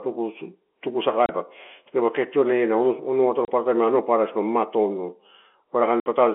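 Packet loss filled with silence punches holes at 1.26–1.29 s, 3.45–3.48 s and 6.0–6.06 s: hard-edged, flat, empty gaps in the waveform and spectrogram, fitting 30 ms packets.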